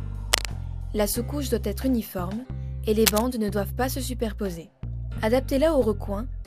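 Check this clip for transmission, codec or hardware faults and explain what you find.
There's one fault here, and it happens twice: cable scratch noise, from 0.32 to 0.49 s and again from 3.06 to 3.25 s. Each burst is a short, ragged patch of scratching and crackle lasting under a fifth of a second, sitting at roughly the same loudness as the sound itself. The likely cause is a worn lead, plug or pot being moved, so its contact resistance jumps around and injects irregular noise into the signal.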